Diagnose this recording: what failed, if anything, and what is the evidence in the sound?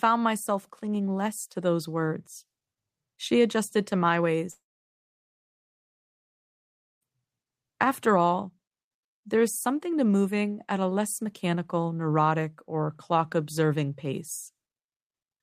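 Right after "adjusted to my", at 4.51 s, the speech collapses into a brief fading buzz and then silence until 7.03 s. About 2.5 s of talk never returns. This is likely a long network dropout: the receiver concealed the gap briefly, then fell silent.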